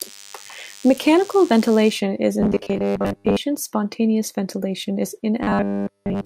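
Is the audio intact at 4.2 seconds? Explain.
Yes, the audio is intact at 4.2 seconds, with no dropout, click, distortion or other fault at that moment.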